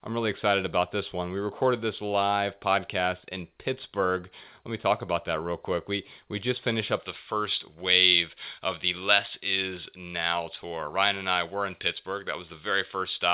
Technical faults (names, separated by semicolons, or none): pre-emphasis left on